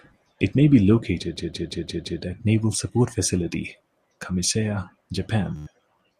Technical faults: system hang loop; Bluetooth stutter

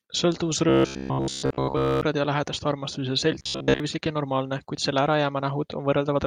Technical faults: robotic sound from repeated short buffers

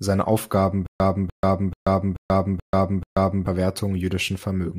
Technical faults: stutter with silent gaps

